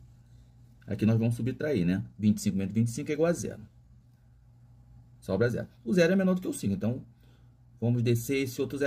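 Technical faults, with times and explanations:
Nothing wrong turns up anywhere in this audio; it's all technically sound.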